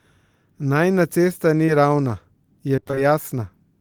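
Short concealed packet loss at 1.65 to 1.70 s. A brief piece of the speech stream arrived too late or not at all, and the receiver patched the hole by extending the sound just before it, pitched if voiced, shaped noise if not, then crossfaded back into real audio. About 25 ms was synthesised to cover roughly 20 ms of missing material, so the moment comes across as a tiny smear or wobble, and a quick consonant there may simply disappear.

Repeated packet loss (robotic sound) from 2.76 to 3.00 s. Here the losses come in a tight cluster, in what sounds like six separate dropouts, the longest about 24 ms. Each gap gets the same extrapolated fill, but before the decoder has fully recovered the next one hits, so nearly half of this quarter-second is concealment rather than real signal. The speech turns choppy, with fragments missing outright.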